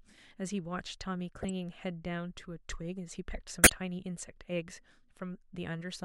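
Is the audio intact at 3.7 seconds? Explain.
No. From 3.64 to 3.72 s a corrupt frame is decoded, spanning roughly three damaged frames: flipped bits make the decoder misplace energy, producing a chirp, squeak or burst of noise peaking near -10 dBFS. A spectrogram shows a short, sharp-edged smear at odd frequencies; the waveform shows an abrupt spike.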